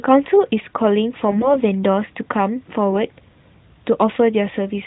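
From 1.28 to 1.59 s the speech turns hoarse and gargly, a burst of AMR bit errors. Flipped unprotected bits put the codec's excitation pulses and fine gain and spectral values in the wrong places. On a spectrogram, harmonics smear into grainy noise below the narrowband 4 kHz ceiling while the level holds steady.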